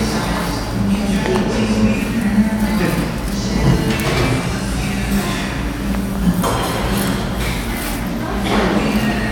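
A voltage pulse, likely from a plug, switch, static discharge or driver glitch, entering the signal path twice produces loud pops in this recording of sounds. Each event is a double pop: the first, from 1.26 to 1.38 s, peaks around 15 dB above the surrounding sound, and the second, from 5.95 to 6.18 s, peaks around 10 dB above it. Both sit on top of the audio, which carries on underneath.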